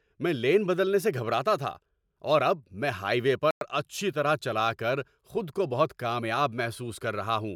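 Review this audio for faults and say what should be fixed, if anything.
At 3.51 to 3.61 s the speech drops to silence for 105 ms, then resumes: a likely Bluetooth stall, where delayed packets emptied the headphones' buffer. Keep the link short and clear of interference.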